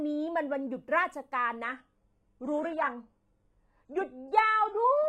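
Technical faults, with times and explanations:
1.65 s to the end, adaptive stream at a lower bitrate. The speech quality drops suddenly, with no gap. Nothing is heard above 11.5 kHz. The treble turns synthetic and codec artefacts rise. This fits a slowed connection forcing a switch to HE-AAC near 12 kbit/s.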